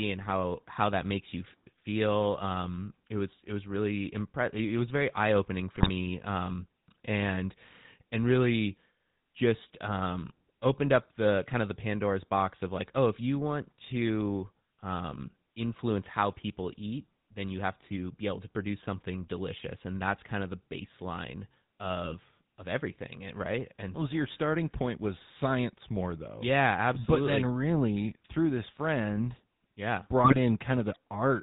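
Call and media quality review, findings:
GSM full-rate codec, whole clip: buzzy, gravelly speech, plainly audible. Spectrogram shows a hard ceiling at 4 kHz and smeared, pulse-driven harmonics. Regular-pulse excitation at a coarse resolution through a vocal-tract model, consistent with 13 kbps full rate.

GSM bit errors at 5.76–5.90 s (after "was very eye opening"), 22.04–22.16 s (between "kind of the baseline" and "of everything eh right") and 30.24–30.39 s (after "through this friend yeah"): squawks and gargling. Waveform shows level spikes. Spectrogram shows bent, broadband blotches. Corrupted filter, pitch and gain parameters.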